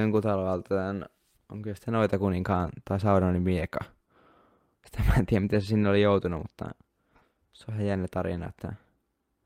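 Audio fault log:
Nothing in this speech recording stood out as a problem on listening.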